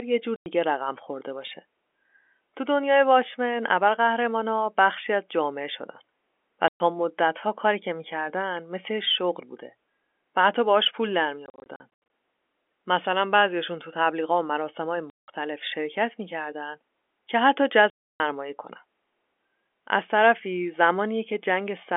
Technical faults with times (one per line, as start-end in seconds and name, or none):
0.36-0.46 packet loss filled with silence
6.68-6.80 packet loss filled with silence
11.46-11.80 packet loss filled with silence
15.10-15.28 packet loss filled with silence
17.90-18.20 packet loss filled with silence